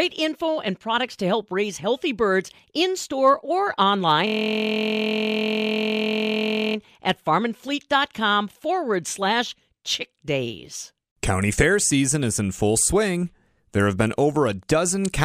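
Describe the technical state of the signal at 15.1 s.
At 15.1 s you're inside a stretch of Wi-Fi interference running from about 14.07 s to the end of the clip. A nearby radio's beacon, every 102.4 ms, is getting rectified by the audio circuit, giving a faint ticking roughly ten times a second, well below the speech.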